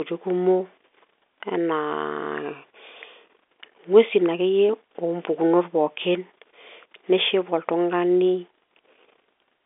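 Nothing stood out on listening to this speech, which carries the narrow band of an ordinary telephone line throughout.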